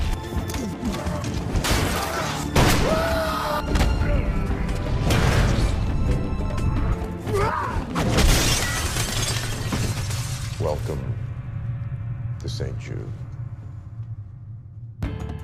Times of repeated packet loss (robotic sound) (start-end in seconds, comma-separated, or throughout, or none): none